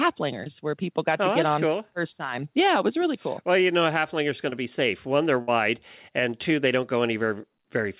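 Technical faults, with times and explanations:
0.44–0.48 s and 4.50–4.54 s, short concealed packet loss: A brief smear just before "where people got oh", then between "know a halflinger's going" and "be safe". Roughly 20 ms of audio never arrived, so the receiver extended the preceding sound to bridge the hole.
5.42–5.49 s, burst of packet loss: The last sound is held and fades, and the sound jumps ahead. About 60 ms of consecutive audio was lost, so the receiver continued and attenuated the last sound before resuming.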